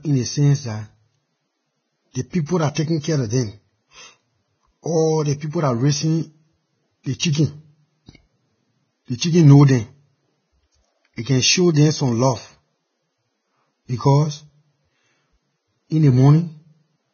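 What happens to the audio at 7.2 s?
Pre-echo runs from 7.19 to 7.22 s. Quantisation noise spreads about 28 ms ahead of a sharp attack, so a short hiss precedes it and softens its onset. Throughout, the speech sounds hissy and grainy, with nothing above 6.6 kHz. Vorbis compression is the likely cause, at a very low bitrate of around 15 kbps.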